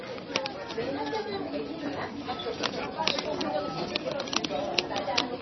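From start to finish the sound is dull and watery, with nothing above about 5.9 kHz and heavy swirling smear on attacks. Unlike a simple low-pass filter, weak detail flickers in and out, likely MP3 compression at a very low bitrate near 24 kbps.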